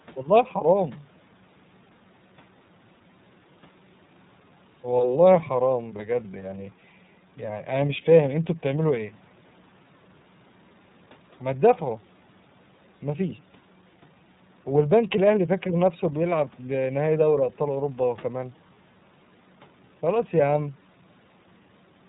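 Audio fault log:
throughout: iLBC codec. The speech is band-limited with nothing above 4 kHz, and it has a plainly audible rough, synthetic texture. Each frame's excitation is coded independently, and the roughness fits 30 ms frames at around 13.33 kbps.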